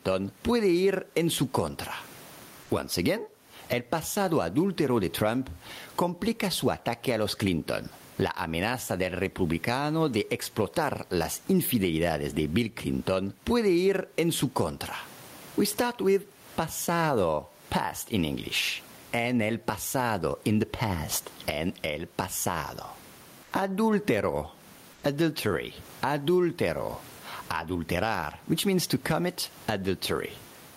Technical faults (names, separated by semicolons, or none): gain pumping; comfort noise in place of the background